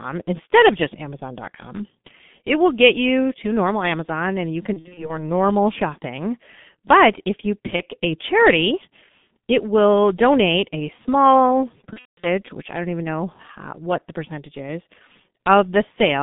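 G.723.1 codec damage runs through the whole clip. The speech is squeezed into a 150 Hz to 3.6 kHz telephone band and coded at about 6.3 kbit/s in 30 ms frames, so it sounds heavily muffled and hoarse, with smeared consonants.

VoIP packet loss concealed by the speech codec first hits from 4.73 to 5.23 s, after "and you". The decoder fills about 150 ms of gaps scattered over 240 ms, the longest 60 ms, by extending its last pitch and filter, giving fading stretches. A brief dropout follows at 7.76 to 7.81 s, between "if you" and "a charity", consistent with one lost frame. The worst comes at 11.93 to 12.28 s, between "will donate a small" and "which I don't even": about 240 ms is concealed, including a 180 ms run that fades and then mutes to silence.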